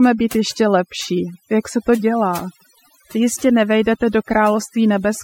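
Overdone noise removal runs through the whole recording. The noise reducer was set too aggressively, pulling individual frequency bands down or out whenever they approached its noise estimate, taking low-level speech detail with them. Pauses fall to near silence scattered with twinkling artefacts.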